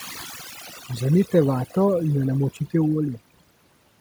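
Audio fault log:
throughout: overdone noise removal. The noise reduction runs too hard, pushing individual frequency bands down or off whenever they sit near its noise estimate, so the background drops and breaks up into twinkling specks while quieter parts of the voice vanish too.
0.70–0.89 s: speech cut by the noise suppressor. The suppressor mistakes softer parts of the speech for noise and turns them down along with the background, by about 7 dB at worst, over roughly a tenth of a second in total, so those sounds come across swallowed and faint.
0.73–1.33 s: noise suppressor catching up. The room noise jumps by about 16 dB at around half a second, and the suppressor's noise estimate lags, so the louder background leaks through with less reduction before sinking by about 10 dB over 600 ms, settling just before "vato in jo".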